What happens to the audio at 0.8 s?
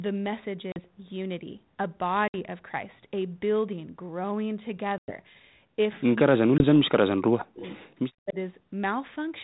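Packet loss on an ADPCM call ends there. From 0.72 to 0.8 s a couple of packets, about 40 ms of audio, never arrived and were filled with silence. The receiving decoder's adaptive predictor and step size drifted out of step with the sender's. At 0.8 s the speech cuts back in abruptly after the hard-edged hole, slightly distorted, and it settles within some tens of milliseconds.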